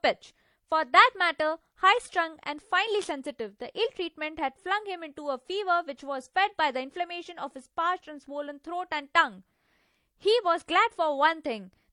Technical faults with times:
0.00-11.93 transcoding between lossy codecs

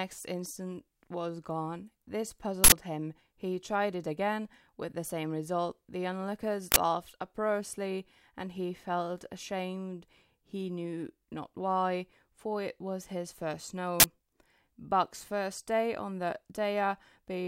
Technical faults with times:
2.64-2.72 uninitialised buffer
6.72-6.76 uninitialised buffer
14.00-14.04 uninitialised buffer

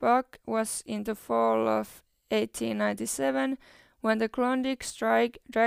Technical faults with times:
none

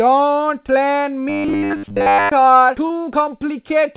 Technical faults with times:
1.29-2.32 robotic sound from repeated short buffers
1.66-1.72 short concealed packet loss
2.86-2.92 short concealed packet loss

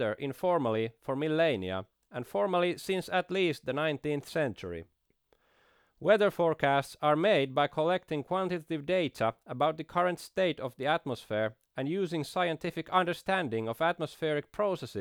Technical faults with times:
none

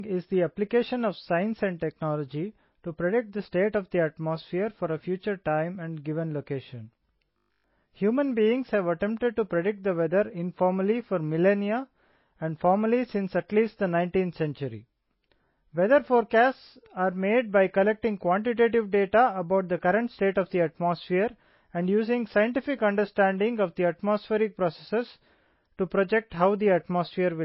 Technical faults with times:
0.00-27.45 MP3 compression
7.26-7.72 robotic sound from repeated short buffers

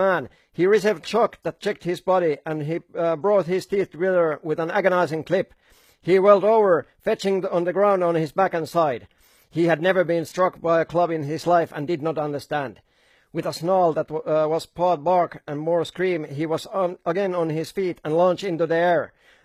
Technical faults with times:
0.00-19.44 HE-AAC compression

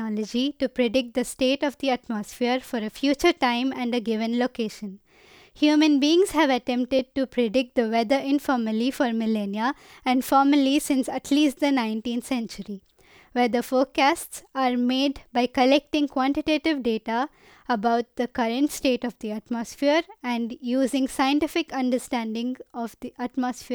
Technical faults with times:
6.99 underrun with held sample

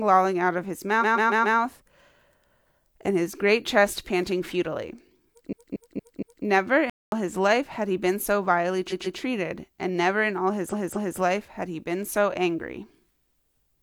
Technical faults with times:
0.98-1.54 repeated frames
5.48-6.41 repeated frames
6.90-7.12 playback stall
8.87-9.15 repeated frames
10.68-11.16 repeated frames

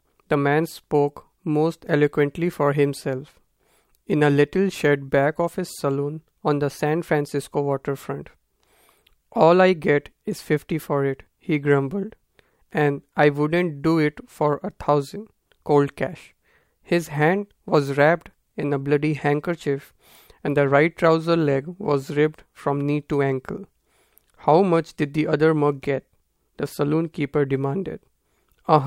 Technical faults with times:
none

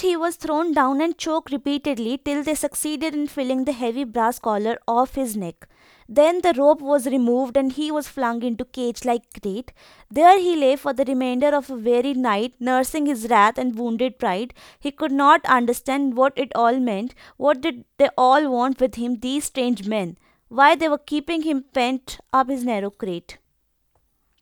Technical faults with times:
none

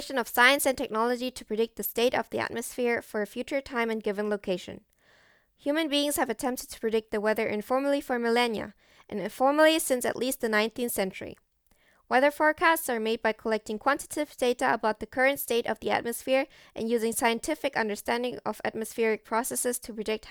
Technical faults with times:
none

